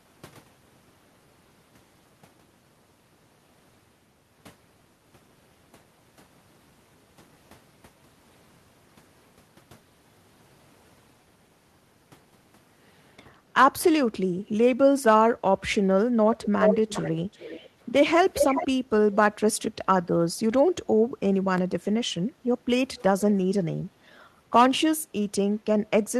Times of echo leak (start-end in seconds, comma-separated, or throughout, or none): 16.34-17.69, 18.31-18.67